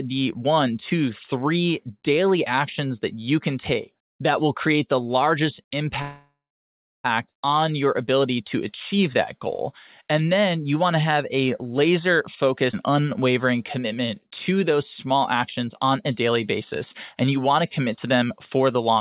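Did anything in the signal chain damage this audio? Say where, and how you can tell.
Yes, there is damage at the network and jitter-buffer stage of what sounds like a G.711-style narrowband call path, with nothing above 4 kHz.

A call audio freeze runs from 6.02 to 7.06 s. The sound just before it is stretched into a fading buzz, which then drops to silence for about 0.68 s before the speech resumes where it left off. On a spectrogram, the last spectral frame is smeared horizontally and thins into a blank band, and the waveform's envelope decays to a flat line. The likely cause is delayed packets draining the jitter buffer, which inserted about 1.02 s of gap while losing nothing.

A skip ahead occurs at 12.72–12.75 s. The speech jumps forward with only a tiny joining gap, and roughly 300 ms of material is missing. The two sides meet almost directly. On a waveform, the cycles change shape abruptly at one point. 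On a spectrogram, the formant tracks break off and restart at unrelated positions. This is audio dropped in transit or discarded by an overfull buffer while later packets were already queued.

Jitter buffer speed-up occurs at 13.79–15.14 s, at about 107% speed, and at 15.62–16.30 s, at about 108%. The speech sounds slightly hurried while its pitch stays unchanged. The receiver trimmed pitch-period-sized slices repeatedly, removing roughly a tenth of a second in the first stretch and about 70 ms in the second, to shrink excess buffered delay. On a spectrogram, the harmonic spacing holds steady while syllables and formant transitions are compressed in time. The waveform shows small discontinuities where slices were removed.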